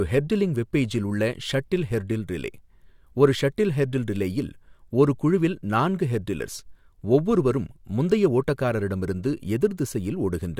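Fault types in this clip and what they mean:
No technical faults detected.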